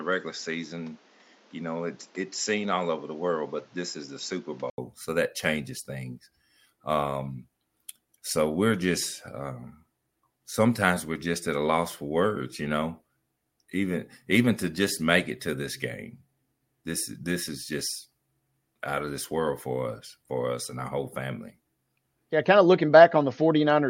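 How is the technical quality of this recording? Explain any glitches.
The recording has one glitch, at the start. From 0.0 to 4.78 s the speech sounds dull and about 5 dB quieter, with a faint noise floor roughly 30 dB down. This is likely an input switched to a poorer device that passes nothing above 7.5 kHz. On a spectrogram that section is cut off flat at 7.5 kHz, and the waveform shows an 80 ms gap at 4.78 s before the fuller sound takes over.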